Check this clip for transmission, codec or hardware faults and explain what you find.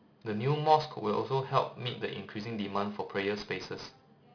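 Aliasing runs through the whole speech clip. Energy above 5.5 kHz folds back below that edge, roughly 20 dB under the signal, which fits a rate drop from 16 kHz to 11 kHz without an anti-alias filter. Sibilants sound gritty and metallic.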